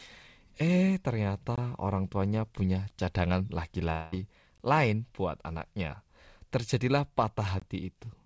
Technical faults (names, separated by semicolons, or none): gap between chunks; long network dropout